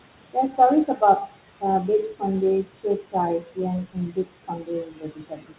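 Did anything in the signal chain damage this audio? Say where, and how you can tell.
Yes. The damage happens in the call processing stage. The noise suppressor is cutting whatever it classifies as steady noise by about 21 dB, frame by frame. You can hear this throughout: the room noise, which sits about 13 dB below the speech, drops away in the gaps and comes back underneath the speech. All of this sits on top of the 4 kHz band limit of the G.711 call path.

The same suppressor also removes parts of the speech itself, treating them as noise. This happens at 0.33–0.59 s, 0.85–1.02 s, 2.64–3.15 s, 3.40–3.59 s and 3.85–5.58 s. Level falls by about 14 to 22 dB, with the deepest drops in the third and last spans. The first four spans each lose a brief fraction of a second. The last loses well over a second in total. Soft consonants and endings there sound swallowed or faint because the suppressor's gain closed on speech it judged too noise-like.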